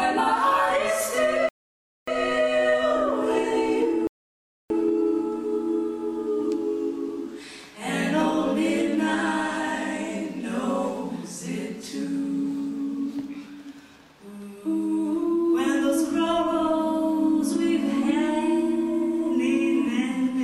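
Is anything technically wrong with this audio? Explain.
Yes, two rebuffering stalls. From 1.49 to 2.08 s and from 4.07 to 4.70 s the player runs out of downloaded audio, goes silent for 0.59 s and 0.63 s, then resumes exactly where it stopped. Each shows as a flat gap in the waveform and a blank vertical band on the spectrogram.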